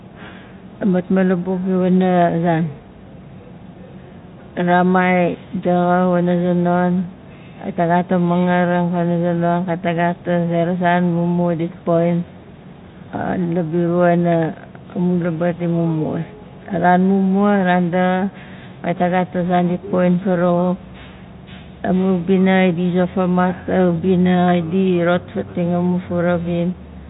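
No faults can be heard.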